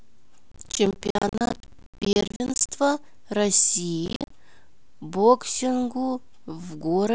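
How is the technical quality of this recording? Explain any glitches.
Processor overload crackle breaks up the speech twice, from 0.52 to 2.72 s and again from 4.06 to 4.30 s. The processor is missing its deadlines for short blocks of roughly 15 ms, and each late block is replaced by silence with abrupt edges. The first burst holds dozens of these dropouts and the second about 15, heard as gritty tearing over the speech. A waveform shows a comb of hard-edged gaps, and a spectrogram shows thin vertical broadband streaks.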